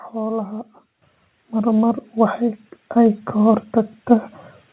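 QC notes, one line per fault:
1.02 to 4.08 s, microphone volume stepped up: the input level jumps in single steps at 1.02 s (about 8 dB, right before "mar mar"), 2.04 s (about 3 dB, just after "mar mar"), 3.06 s (about 1 dB) and 4.08 s (about 2 dB). The gain is raised at the device itself, so voice and background lift together, and the steps land roughly a second apart as the level control keeps nudging upward. Through the narrow call path, with nothing above 4 kHz, the bigger jumps come across as abrupt loudness shifts.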